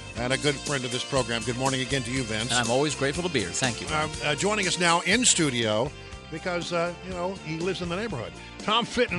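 Pre-emphasis left on, 0.31 to 5.6 s: an uncorrected 75 µs FM treble boost lifts 10 kHz by about 14 dB, making the sound thin, bright and sibilant.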